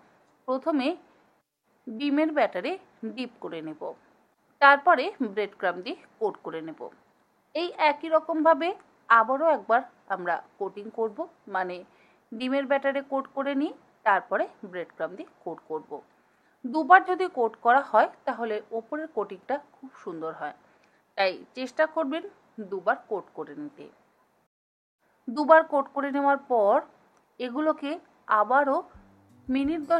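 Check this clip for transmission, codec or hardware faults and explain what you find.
No transmission, codec or hardware faults are audible anywhere in the clip.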